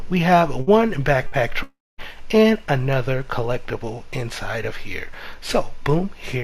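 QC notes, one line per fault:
0.61 to 0.70 s and 1.27 to 1.35 s, burst of packet loss: Each time a short run of packets failed to arrive. The receiver stretched the last sound for about 50 ms, fading it as a brief buzz or hiss. Playback then resumes with roughly 60 ms of audio skipped.
1.63 to 2.01 s, long network dropout: The sound freezes into a fading buzz or hiss. About 240 ms of silence follows. The audio returns with about 360 ms missing. This is likely a network outage, not a burst of lost packets.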